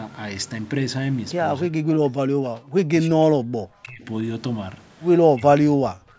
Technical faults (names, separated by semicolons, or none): speech suppressed in double talk